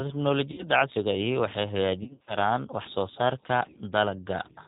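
The whole clip runs through G.729 at 8 kbit/s, so nothing above 4 kHz survives and the speech sounds noticeably rough and synthetic. VoIP packet loss concealed by the speech codec hits at 0.52 to 0.65 s, about 60 ms gone, then at 2.03 to 2.36 s with 150 ms scattered over 240 ms in short runs. The decoder stretches its last frames into a fading buzz or coloured noise and stays weak for a while after each gap.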